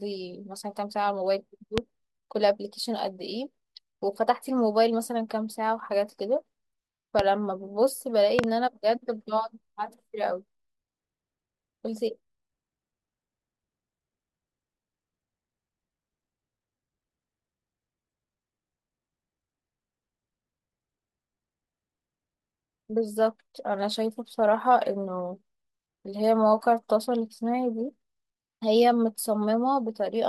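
Loud pops at 1.78–1.80 s, 7.19–7.22 s and a double pop at 8.39–8.46 s, each about 20 dB above the speech, which continues underneath; likely voltage spikes from a switch, plug or static discharge.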